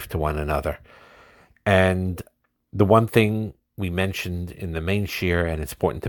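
No faults heard in this speech recording; the signal path holds steady throughout.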